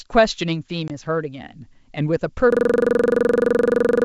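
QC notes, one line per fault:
0.88 to 0.91 s, packet loss on an ADPCM call: a hard-edged 20 ms hole of silence, about one packet's worth, then the speech resumes with brief distortion as the decoder's predictor and step size recover their sync with the sender.
2.52 s to the end, system hang loop: a rattling stutter as one 42.7 ms scrap of speech repeats 36 times at about 23.4 Hz, because the system froze while the sound hardware kept replaying its ring buffer, a length that fits a 1024-sample buffer.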